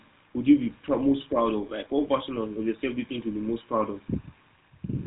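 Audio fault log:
throughout, GSM full-rate codec: the speech has a plainly audible buzzy, gravelly roughness because the voice is rebuilt from a vocal-tract model driven by a sparse, regularly spaced pulse excitation, which fits the 13 kbps full-rate coder. Nothing passes above 3.8 kHz.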